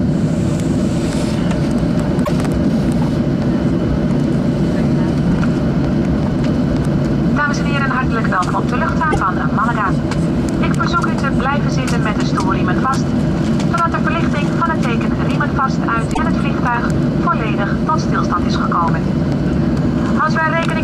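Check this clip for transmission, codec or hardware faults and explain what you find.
Three short disturbances stand out, at 2.24 to 2.29 s, 9.11 to 9.16 s and 16.13 to 16.19 s, each lasting roughly 56 to 58 ms and breaking the flow of the audio. The likely cause is a broken MP3 bit reservoir: after missing frames, the decoder reads borrowed bytes from the wrong frame, corrupting about two 26.1 ms frames. A simple dropout would leave clean silence instead.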